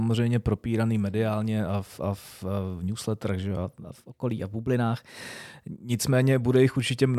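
From 3.64 to 5.84 s the speech suddenly runs about 6% fast and sits roughly a semitone sharp, then snaps back to normal. That's likely a drift correction step, where clock-matching software briefly changed the playback rate to rebalance its buffer.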